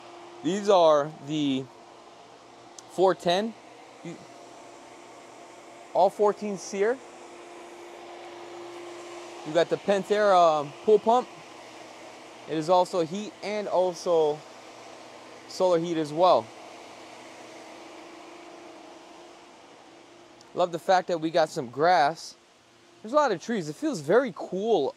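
At 17.9 s, compressed frames are skipped. One stretch of the encoded stream never reaches the output, so the audio jumps ahead by about 20 ms, which fits a single lost frame.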